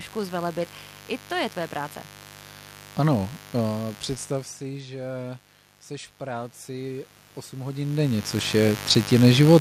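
A speech recording carries a steady, raspy mains buzz at roughly 20 dB below the speech, drawn on a spectrogram as evenly spaced horizontal lines at 50 Hz and its harmonics climbing into the kilohertz range. Automatic gain rising follows a drop in input of about 16 dB, as the talker moves back around 4 s and again around 7.5 s. The controller lifts the level by 3 dB from 4.58 to 5.31 s, just before "jsi v", then by 7 dB from 6.19 to 8.6 s, just after it. On the waveform, both voice and background swell gradually together.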